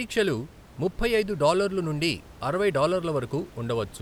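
Nothing goes wrong technically anywhere in this speech clip, and the only thing under the talking is a bit of room noise sitting about 23 dB below it.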